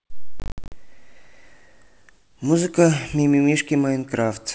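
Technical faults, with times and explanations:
0.40–0.72 s, packet loss on an ADPCM call: about ten packets vanish, 180 ms lost across 320 ms, longest gap 60 ms, each replaced by hard-edged silence. The decoder's predictor and step size lose step with the sender's, so the sound resumes slightly distorted until it resynchronises.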